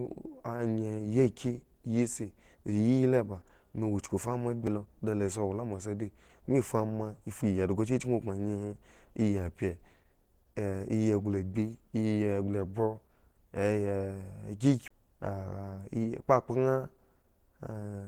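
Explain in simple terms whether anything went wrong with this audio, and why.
Throughout the recording, the speech has a rough, grainy, hoarse and muffled quality, as if the voice were rubbed thin. That is the sound of heavy compression, and the likely cause is Opus compression at a very low setting. To save space, the encoder switched into a mode built for talking and filled in the details it couldn't afford with approximations, so the natural texture of the sound is lost.

At 4.67 s the sound jumps forward very slightly without any gap of silence. This is a dropped buffer (overrun). The recording software likely fell behind for an instant, and a tiny slice of audio, around 15 milliseconds, was overwritten before it could be saved. The two surrounding pieces were then stuck directly together, which produces the jump.

From 14.88 to 14.91 s there is a very short mute of about 30 milliseconds, after which the speech carries on from a different point. 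This is a CD skip. A bump or a flaw on the disc made the player's laser jump to another turn of the disc's track. The player briefly went silent while it recovered and then picked up playing from the new spot.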